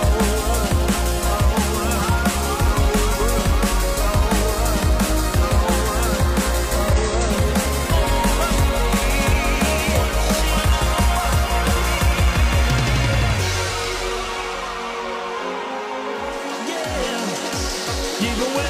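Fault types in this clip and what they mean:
Compressed frames skipped: whole frames of the encoded stream never reached the output, either absent from the file or rejected by the decoder as corrupt. The audio therefore lurches forward with material missing. Near 6.92 to 6.98 s roughly a fifth of a second vanishes, and near 13.66 to 13.71 s about a tenth of a second.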